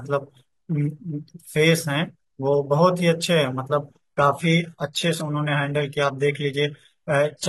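At 4.02 s the adaptive stream switches to a lower bitrate, because the connection slowed, and stays there to the end. The change is sudden with no gap: nothing remains above 11.8 kHz, and the speech turns thin and synthetic, which fits a drop from 96 kbit/s AAC to 16 kbit/s HE-AAC.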